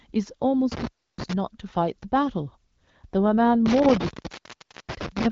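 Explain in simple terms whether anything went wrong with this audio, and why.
Something did go wrong, twice. The speech shows intermittent contact, the sound of a loose cable or plug. Between 0.72 and 1.33 s the connection opens for about 0.31 s. The sound drops out, with crackle at the edges. Between 3.66 and 5.26 s it happens again, and the gap lasts about 0.80 s. During each gap faint hiss is left. The signal then returns when the contact closes.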